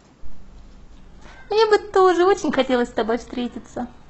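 Adaptive stream at a lower bitrate from 0.97 s to the end: the speech abruptly turns artefact-laden without a gap, which fits a switch from about 96 kbit/s AAC to 16 kbit/s HE-AAC.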